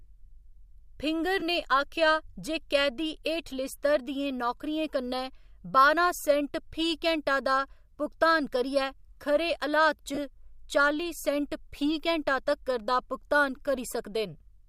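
Lost LE Audio frames interrupt the speech twice. From 1.40 to 1.42 s, about 15 ms of Bluetooth data goes missing, and the LC3 decoder fills the hole by repeating the last spectrum with scrambled phase. The result is a brief, rough smear. At 10.14 to 10.18 s, a 30 ms loss, consistent with four 7.5 ms frames, produces a longer grainy blur before speech resumes. A faint breathiness in the highs is likely from the light LC3 compression.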